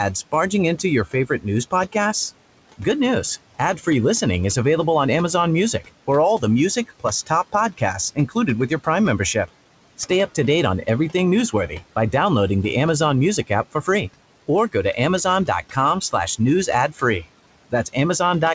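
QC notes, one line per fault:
Throughout: noise suppressor artifacts. The background drops by about 18 dB between phrases and swells under speech.
0.32–1.95 s, 5.81–10.1 s, 13.47–13.88 s, 14.47–18.55 s: speech cut by the noise suppressor. Soft sounds and endings sink by about 12 to 18 dB, swallowed along with the noise rather than going silent like a dropout.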